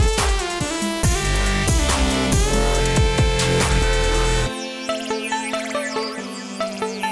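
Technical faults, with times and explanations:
No technical faults detected across the clip.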